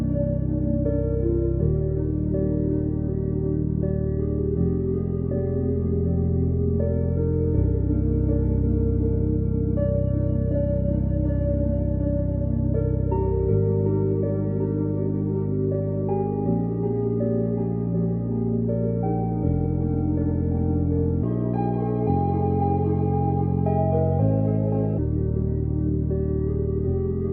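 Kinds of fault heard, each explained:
Section at the wrong speed: a stretch was likely replayed against the wrong clock, running 1.4 times too fast from 21.23 to 24.98 s. Speed and pitch rise together, so the sound turns hurried and shifts up by roughly five semitones, then snaps back afterwards.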